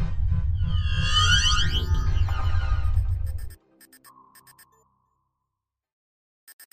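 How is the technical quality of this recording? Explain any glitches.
One glitch stands out. From 1.94 to 3.51 s there is a doubled audio track: a full-band copy, likely captured again through a slower path, trails by roughly 150 ms at about 5 dB lower. It sounds like a dry slapback. The waveform and spectrogram show each event repeated, and the copy switches on and off abruptly.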